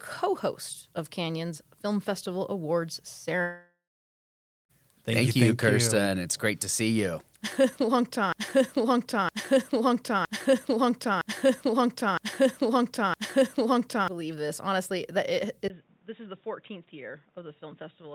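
From 3.41 to 4.71 s, a long network dropout likely removes about 1.28 s of speech. A fading fill gives way to roughly 0.91 s of silence, and the speech resumes beyond the gap rather than picking up where it stopped.

From 8.32 to 14.08 s, just before "believe this", a broken-record loop plays one identical 0.96 s fragment six times back to back. This is likely a stalled stream. The repeats are exact copies, which sets them apart from a decaying echo.

At 15.68 s, after "that it", a 20 ms silence marks the input switched to a poorer device, likely a headset. Nothing above 3.8 kHz survives, the level drops about 10 dB, and new noise sits roughly 35 dB down. The dull sound lasts to the end instead of recovering.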